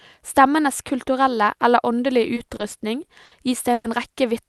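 Speech, heard through a call link whose coding tops out around 12 kHz, in keeping with an Opus-style codec. From 2.35 to 3.34 s there are repeated stalls (stutter): seven short holds, the longest 60 ms, adding about 180 ms. The receiver keeps stretching the last sound while late packets catch up, so it drags and judders but nothing's lost. Then from 3.73 to 3.87 s there's a call audio freeze: a 110 ms hold where the sound is carried on before resuming right where it stopped, likely the jitter buffer running dry on a sudden delay jump.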